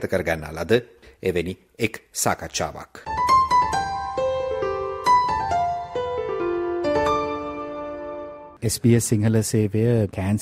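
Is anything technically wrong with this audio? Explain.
No, nothing technically wrong can be heard anywhere in this audio.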